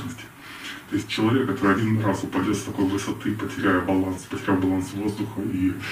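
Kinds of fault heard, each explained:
Nothing stood out on listening.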